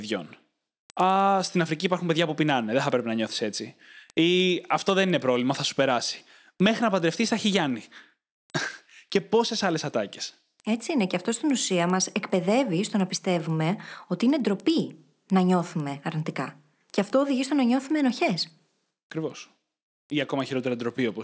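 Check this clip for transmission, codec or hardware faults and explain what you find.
One fault runs through the whole clip. The resampler is restarted on every block, throughout. Each 100 ms block was converted from 48 kHz to 16 kHz in isolation, leaving edge errors heard as steady 10 Hz ticks under the speech.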